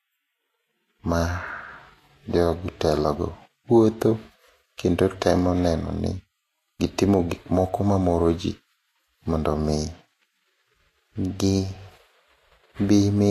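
From start to finish the speech has a hissy, grainy top end with roughened tones and smeared consonant attacks, most likely Vorbis compression at a low rate, around 33 kbps. The treble gets quantised so coarsely that real detail turns into noise-like fizz.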